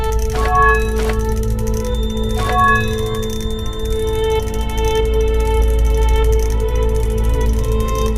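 From 1.80 to 4.44 s a thin, slowly swelling and fading 3.6 kHz feedback whistle sits about 20 dB below the sound, likely from a loudspeaker-to-microphone loop hovering just at feedback.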